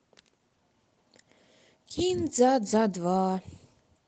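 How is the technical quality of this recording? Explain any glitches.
No glitches to explain: the speech carries Opus voice compression with the band held to super-wideband and only a light coding texture, which fits a hybrid-mode stream at around 20 kbps, and nothing else stands out.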